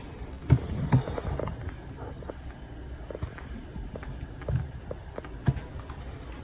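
The audio arrives over a call path with nothing above 4 kHz, which points to a narrowband codec such as G.711 mu-law. A short stall from a late packet occurs at 0.34 to 0.43 s. The jitter buffer ran dry, so the receiver stretched the last sound by 74 ms until the packet arrived, then resumed where it left off. Nothing is lost, but that moment is held too long, possibly with a faint buzz or dip, and the playout delay grows by 74 ms. A jitter buffer speed-up follows at 5.90 to 6.32 s. To drain excess buffered audio, the receiver repeatedly cut out short pitch-period segments, about 70 ms in total. Playback runs at 115% speed with pitch unchanged, so the passage sounds hurried.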